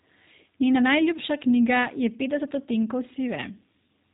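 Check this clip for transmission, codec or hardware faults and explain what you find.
The clip carries G.729 codec damage throughout. The speech is rebuilt from a vocal tract filter, pitch prediction and a few pulses per frame, consistent with an 8 kbit/s G.729A stream, so it sounds plainly rough and synthetic. A spectrogram shows a hard ceiling near 3.8 kHz, with empty space above.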